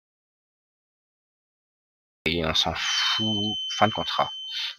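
The clip opens in an audio dropout to silence that runs until 2.26 s. It is silence with no room tone at all. The input was likely lost while the recorder kept writing silence, so whatever happened there is gone.

From 2.73 s to the end, a feedback whistle sits behind the sound. It is a thin, steady tone near 3.1 kHz, well below the main signal, swelling and fading slowly in level. A loudspeaker-to-microphone loop is likely hovering just short of runaway.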